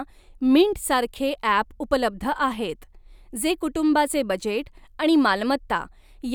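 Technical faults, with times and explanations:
No technical faults can be heard in this speech recording. There is nothing here that needs a time or an explanation.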